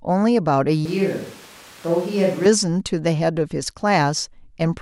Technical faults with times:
0.86-2.45 switch to a distant microphone

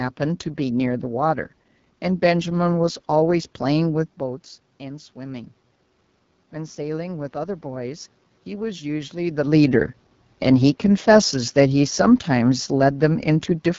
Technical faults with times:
0.00-13.79 AMR wideband (HD Voice) codec
6.52-9.44 automatic gain rising

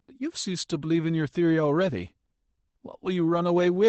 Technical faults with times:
0.95-0.97 lost packet rebuilt from error correction
1.87-1.89 lost packet rebuilt from error correction

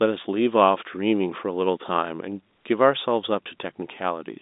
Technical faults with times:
none

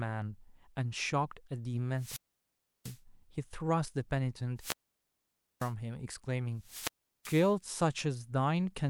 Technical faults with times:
1.95-3.01 wireless microphone squelch dropout
4.56-5.74 wireless microphone squelch dropout
6.58-7.56 wireless microphone squelch dropout

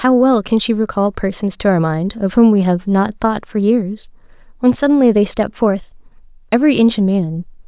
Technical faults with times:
none

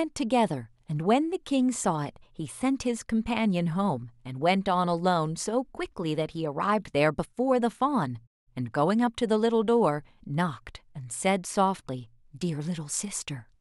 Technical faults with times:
none

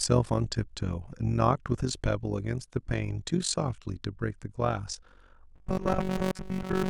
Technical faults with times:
0.00-6.89 overlap-add ripple
5.55-6.89 robotic sound from repeated short buffers

